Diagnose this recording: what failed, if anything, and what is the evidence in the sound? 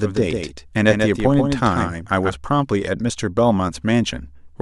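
A doubled audio track is present from the very start of the speech until about 2.3 s, where the second copy stops abruptly. The duplicate is full-band, roughly 150 ms behind and around 5 dB quieter, with no decay or room colouring. That sets it apart from acoustic echo or reverb, which would trail off in repeated, fading reflections. The likely cause is the same signal being captured a second time through a slower driver or buffer path and mixed back in.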